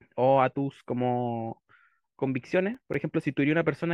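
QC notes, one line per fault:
2.75–3.00 s processor overload crackle: a run of missed deadlines drops a handful of short silent gaps, fitting buffers of around 5 ms, into the speech, heard as gritty crackle.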